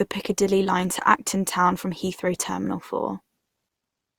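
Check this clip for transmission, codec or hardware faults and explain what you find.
One codec fault runs through the whole clip. Generation loss, from start to end: the speech was likely decoded and re-encoded around five times with Opus at a setting that fits roughly 64 kbit/s, each pass quantising on a shifted frame grid so that noise accumulates. The result sounds swirly, smeared and hollow, with blurred consonant attacks, and nothing is present above 20.4 kHz.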